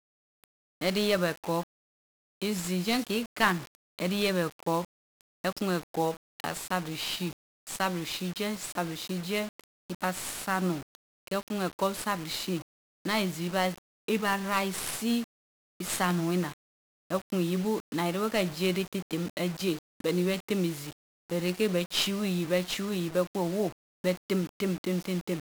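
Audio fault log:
Throughout: 1-bit DFPWM compression. Each sample is coded as a single up-or-down step of an adaptive slope, so the speech is fuzzy and crackly and its treble is buried under dense broadband hiss. Unlike steady background noise, the grit tracks the signal. The roughness fits a coder running near 48 kbps.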